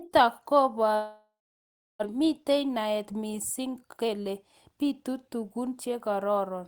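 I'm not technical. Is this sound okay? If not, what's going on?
No. From 0.95 to 2.05 s the sound cuts out. A short fading buzz fills the gap at first, then there is silence, and about 0.6 s of the speech never comes back. This is a long network dropout, likely caused by packets failing to arrive.

From 2.14 to 6.39 s the speech plays about 10% faster but keeps its normal pitch, so it sounds hurried. This is a jitter buffer speed-up. The receiver snips out many tiny slices, around 0.4 s in total, to catch up on the delay that built up during the dropout.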